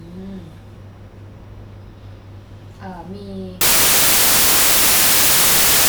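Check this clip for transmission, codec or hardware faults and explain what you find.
One fault is present. Samples built from the wrong bytes, from 3.61 s to the end of the clip at 5.89 s: the decoder starts assembling each sample from mismatched bytes, whether shifted by one position, reversed in order or misaligned. The rapidly fluctuating low-order bits end up as the most significant part of every value, so the speech turns into loud, harsh broadband noise, close to white on the louder sounds.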